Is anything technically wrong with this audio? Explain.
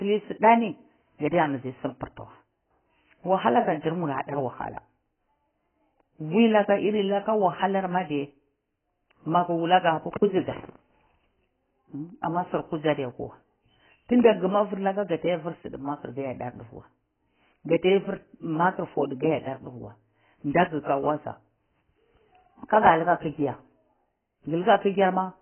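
Yes. Throughout the speech there is heavy AAC compression damage: nothing survives above 3.1 kHz, and sibilants and sustained sounds are smeared and warbling. The likely cause is AAC-LC coding at a very low bitrate, around 12 kbps, where the codec quantises each frame's frequency lines so coarsely that it drops the top band. A simple low-pass filter would only dull the sound; the warbling smear is what marks it as codec damage.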